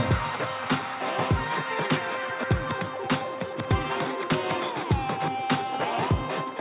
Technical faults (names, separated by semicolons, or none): none